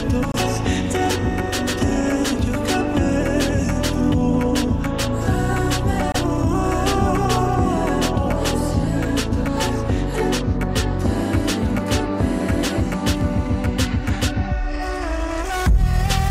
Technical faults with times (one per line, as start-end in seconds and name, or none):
0.32-0.35 Bluetooth dropout
6.12-6.16 Bluetooth dropout